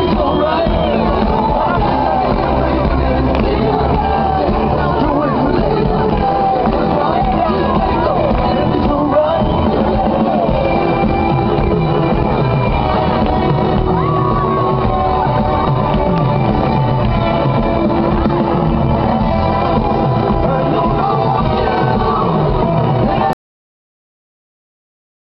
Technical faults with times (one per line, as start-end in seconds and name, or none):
23.33-25.29 cut-off end